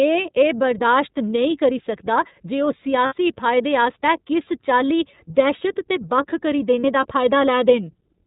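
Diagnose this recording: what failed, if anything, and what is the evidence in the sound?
iLBC codec throughout, a codec-stage fault: the speech is band-limited to 4 kHz and sounds plainly rough and synthetic, which fits 13.33 kbps iLBC with 30 ms frames.

Lost iLBC frames at 3.06–3.14 s, just before "फायदे आस्तै", and at 6.80–6.84 s, a network-stage fault: the decoder repeats the last pitch cycle with added noise, giving a brief buzzy held vowel. The gaps fit two frames and one frame.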